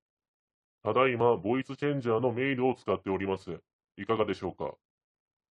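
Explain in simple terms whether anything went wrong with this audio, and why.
Nothing went wrong with this audio, because no faults can be heard anywhere in it.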